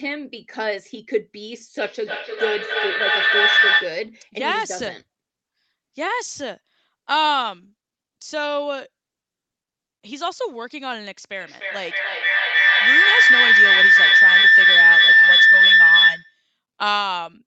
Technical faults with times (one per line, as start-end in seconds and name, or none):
1.78-4.12 feedback howl
11.41-16.43 feedback howl